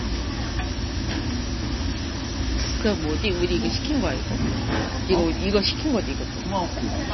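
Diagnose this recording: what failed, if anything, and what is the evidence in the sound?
The codec stage is the likely culprit: heavy MP3 compression throughout, consistent with a bitrate around 24 kbps. The encoder cut everything above 5.9 kHz, leaving the sound dull, and zeroed weak frequency lines that flicker between frames, producing a watery, swirling texture with smeared attacks.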